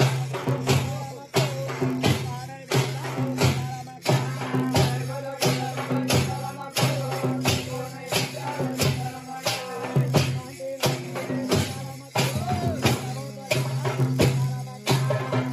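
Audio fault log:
throughout: block size mismatch (padded). A steady buzz at 43.1 Hz sits under the audio, which fits a 1024-sample read block. Each block arrives slightly short and is zero-filled, so playback runs at 0.999 times normal speed with timbre unchanged.
0.0–4.0 s: adaptive stream starting at a low bitrate. The opening's missing or synthetic treble and stronger artefacts point to a low-bitrate HE-AAC start. At 4.0 s quality steps up abruptly without a gap, consistent with a switch to AAC-LC around 96 kbit/s.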